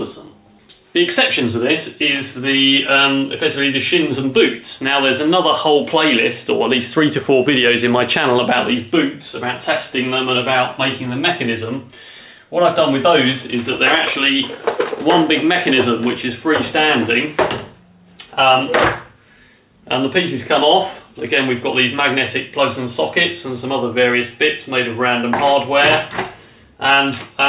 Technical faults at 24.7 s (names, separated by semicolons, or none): none